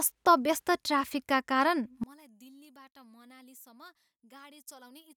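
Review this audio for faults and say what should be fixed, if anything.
One channel inverted, from 2.04 s to the end at 5.16 s: the speech suddenly drops by about 27 dB and turns faint, as if most of it had been cancelled. The likely cause is reversed polarity on one stereo channel, so when the two channels are summed to mono, the centred speech they share largely cancels, leaving only the faint difference between them. Fix it by flipping the affected channel's polarity back. To prevent it, check polarity and mono compatibility on every channel before summing or exporting.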